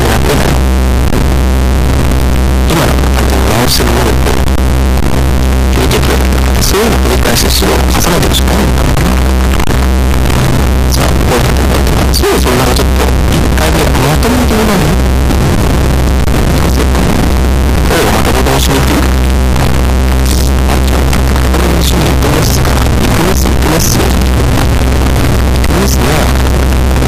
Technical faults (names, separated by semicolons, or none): float read as integer